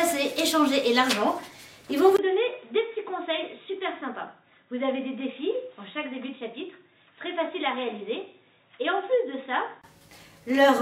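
At 2.17 s, after a 20 ms gap, the sound turns dull and boxy until 9.84 s: nothing above 3.8 kHz, roughly 10 dB quieter, with a new noise floor well beneath it. This is likely the input switching to a poorer device, a narrower-band microphone.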